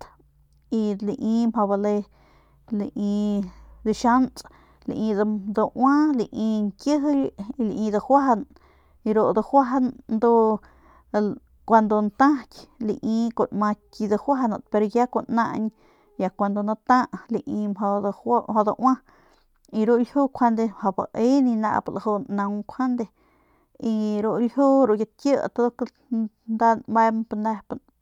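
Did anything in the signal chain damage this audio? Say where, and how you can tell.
No, nothing in this speech recording stood out on listening as damage from any stage of the signal chain.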